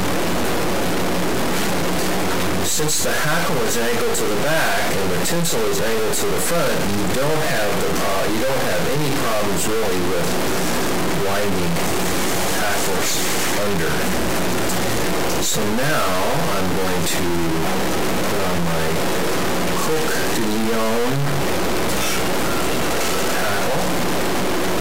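Harsh, buzzy distortion runs through the whole thing, with gaps filled by loud noise, which points to a stuck bit, likely a fairly high bit jammed around -15 dBFS.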